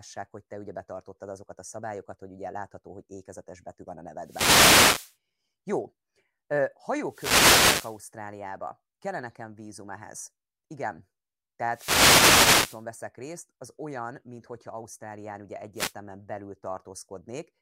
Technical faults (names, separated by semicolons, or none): wireless microphone noise hit